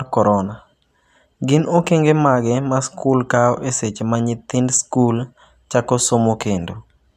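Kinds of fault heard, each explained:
No technical fault can be heard anywhere in the recording. There is nothing to list under any kind of fault.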